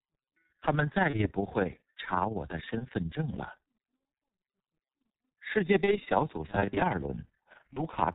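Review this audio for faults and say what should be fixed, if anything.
The speech sounds muffled and hoarse from start to finish, with smeared consonants and nothing above 4 kHz. This is G.723.1 codec damage, and heavy: the thin, gritty texture points to its 6.3 kbit/s mode, whose 30 ms frames and slowly updated voice model cannot follow quick articulation. Carry the speech on a wideband codec at a higher bitrate instead.

Throughout, the level flutters rapidly, around 20 times a second and about 6 dB deep, giving a rough, robotic tremolo. This is overlap-add ripple: the audio was split into windowed frames and rejoined with an overlap whose windows do not sum to constant gain, so loudness swells and dips once per frame. Use a window and hop size that sum to constant gain.

At 1.10 to 1.28 s, 2.78 to 2.87 s, 5.84 to 5.99 s and 7.73 to 7.86 s the speech is stretched into a buzzy tone or coloured noise that fades, then stays weak briefly before recovering. 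This is VoIP packet loss concealed by the speech codec. Each gap fits a single lost 30 ms frame. The decoder stretched its last pitch and filter with falling gain, and because later frames build on that state, the distortion outlasts the gap. Add jitter buffering and forward error correction so lost packets are recovered.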